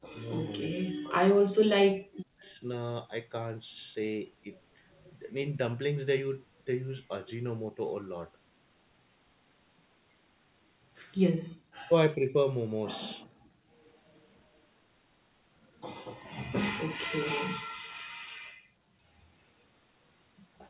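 Right from the start, between 0.0 and 1.33 s and again from 1.73 to 2.62 s, the speech sinks hard, by something like 40 dB at the worst points, and comes back in patches. That's speech suppressed in double talk, likely caused by the far side talking at the same moment: the echo canceller couldn't tell the local talker from the loudspeaker echo, so it turned everything down. The same dips return briefly at 11.78 to 12.35 s and 17.26 to 17.63 s.

Overlapping the tail of that second dip, from 2.42 to 2.62 s, there's a faint delayed copy of the sound trailing about 381 ms behind, very quiet, roughly 35 dB under the speech. That's an echo leak, with the likely cause being a loudspeaker on one end whose echo canceller didn't fully clear what its microphone picked up, so a scrap was sent back down the line.

Then the room sound itself drops out: from 13.27 to 13.7 s it falls by about 33 dB, and from 17.93 to 19.09 s by about 36 dB. 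That's background gated by the echo canceller, which clamped the microphone down hard while the loudspeaker was playing and released it afterwards, so the ambience vanishes and snaps back. All of it sits on a narrow G.711 A-law call path that cuts everything above 4 kHz.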